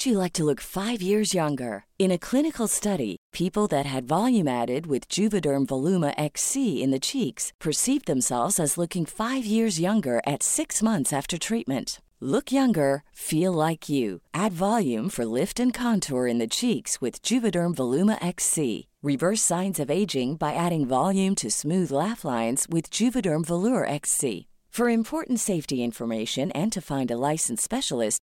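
No technical faults can be heard anywhere in this speech recording. There is nothing in the audio that needs a time marker or an explanation.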